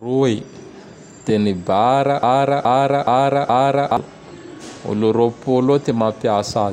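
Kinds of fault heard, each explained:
Broken-record loop: from about 2.23 s to 3.97 s the speech stops moving forward and one fragment of roughly 0.42 s plays back to back, identical each time, four times over. That's the signature of a player, encoder or stream that likely stalled and kept re-sending the last chunk it held. Whatever should have been said in that stretch never arrives; the repeats simply take its place.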